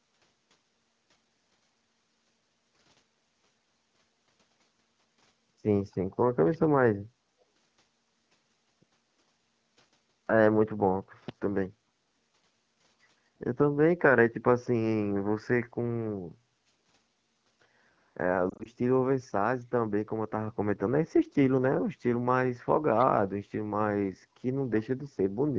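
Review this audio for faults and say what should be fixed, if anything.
Echo leak at 5.86–5.96 s, 6.46–6.67 s and 22.99–23.06 s: faint delayed copies trail the speech by 265 ms. This is likely residual echo that a far-end echo canceller left behind. The fixed lag and low level set it apart from reverberation. Better echo cancellation or a headset at the loudspeaker end would prevent it.

Lost AMR speech frames between 18.49 and 18.67 s: short scattered dips and warbles over about 160 ms, which fits roughly four separate 20 ms frame losses. These are brief glitches, not a drawn-out fade to silence. Stronger radio coverage or error protection would prevent them.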